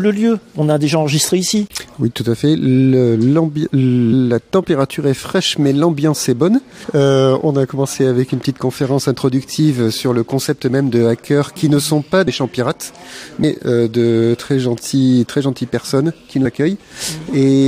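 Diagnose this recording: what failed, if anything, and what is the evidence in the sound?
The codec stage failed: compressed frames skipped at 6.83, 12.26, 13.42 and 16.44 s. The sound jumps ahead by roughly 300, 150, 150 and 100 ms, whole multiples of a 23.2 ms frame. A waveform shows a sudden envelope jump, and a spectrogram a seam at each join.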